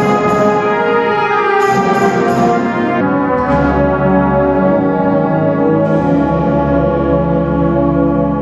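From 3.01 s to the end at 8.4 s, a section at the wrong speed: playback likely ran against a mismatched clock at about 0.8 times the original rate. Everything slows and drops together, roughly four semitones lower, so the sound turns deep and sluggish.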